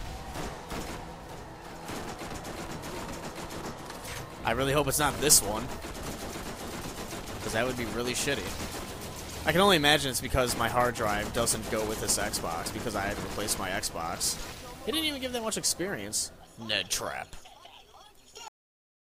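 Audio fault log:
18.48 to 19.19 s, cut-off end: the sound stops mid-event at 18.48 s and drops straight to digital silence for the last 0.7 s, because the final buffers were never written. Unlike a fade-out or natural ending, there is no decay or tail at all.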